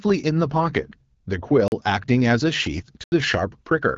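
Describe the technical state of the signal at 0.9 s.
At 0.9 s the speech is intact, with no fault present, and it carries the light, band-limited character of AMR wideband (HD Voice) coding at 12.65 kbit/s.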